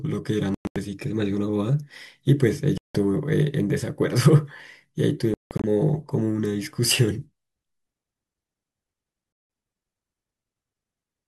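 Audio packets that failed to reach the headphones in time were discarded, most likely a Bluetooth dropout, and four times the speech cuts to silence. At 0.54 to 0.76 s, 192 ms disappears in broken pieces, the longest gap 107 ms. At 2.78 to 2.95 s there is a single 171 ms hole. At 5.34 to 5.64 s, 213 ms is lost in fragments, the longest 171 ms. At 9.33 to 9.50 s another 171 ms gap falls. Each hole opens and closes abruptly or with a fade of a few milliseconds, and the speech picks up further along, as though it had kept playing.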